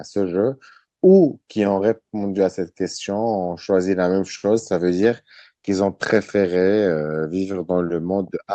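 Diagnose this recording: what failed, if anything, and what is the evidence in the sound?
Nothing failed in this recording; the speech comes through the WebRTC call path with its band limited to about 8 kHz, as an Opus call at that setting would give.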